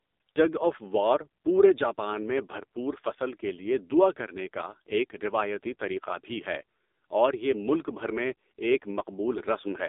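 From start to finish the speech has gone through an AMR narrowband mobile codec, the old 2G/3G phone coder, and it's heavily mangled. The band sits roughly between 250 Hz and 3.7 kHz, so there's no low body and no air on top. The codec rebuilds the voice from a vocal-tract model and a handful of pulses, and at this low rate it comes out buzzy and synthetic, which fits the 5.9 kbps mode.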